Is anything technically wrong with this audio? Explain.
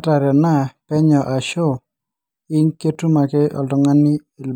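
No, nothing technically wrong stood out on listening to this speech recording.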